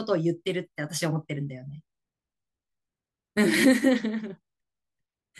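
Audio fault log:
No fault is heard in this speech clip.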